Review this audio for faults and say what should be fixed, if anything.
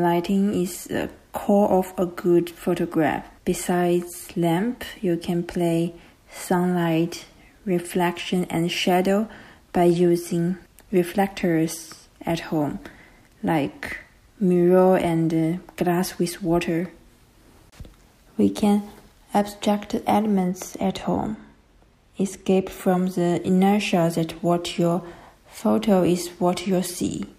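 From 20.37 to 22.73 s the top end sags: de-emphasis applied wrongly, a treble cut meant to undo pre-emphasis landing on audio that never had any or being applied twice, sloping down to about 8 dB lower at 10 kHz than at 1 kHz, so that stretch sounds dull and muffled. To prevent it, confirm whether the source carries pre-emphasis before enabling any de-emphasis stage.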